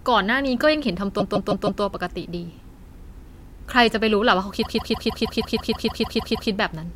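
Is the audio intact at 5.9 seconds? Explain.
No. At 5.9 seconds the speech is caught in repeated frames, which run from 4.61 to 6.49 s. A block of 156.7 ms keeps replaying, twelve extra times, as a stutter. This adds about 1.88 s to the audio.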